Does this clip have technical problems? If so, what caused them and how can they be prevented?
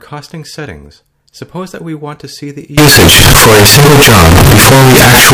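Yes. From 2.78 s onward the sound becomes a harsh, near-square wave at an almost fixed, high level, and background noise is as loud as everything else, which ordinary clipping would not cause. The likely cause is float read as integer: 32-bit float samples decoded as 32-bit integers. Declaring the sample format and checking it at every read and write prevents this.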